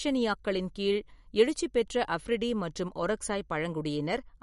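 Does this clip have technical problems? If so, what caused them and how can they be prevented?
Yes. Throughout the speech, nothing remains above 11.2 kHz and a plainly audible watery swirl runs through the sound, likely from MP3 compression at a low bitrate near 50 kbps, where the encoder drops treble and toggles weak frequency lines between frames. Encoding at a higher bitrate prevents it.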